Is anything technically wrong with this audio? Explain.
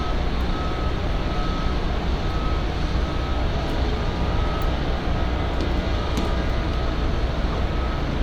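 No, nothing technically wrong turns up here, just the everyday sound itself with nothing getting in its way.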